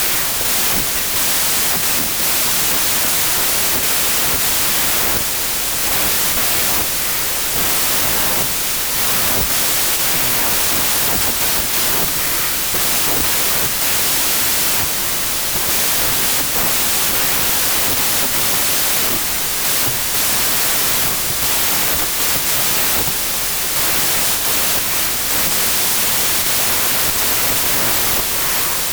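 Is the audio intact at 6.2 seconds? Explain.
No. At 6.2 seconds the speech is buried in loud noise, as it is across the whole clip. This is a wrong sample width fault. Packed 24-bit samples are being read as 16-bit values. Many values are built from mismatched bytes. The result plays at about two-thirds speed and lower in pitch.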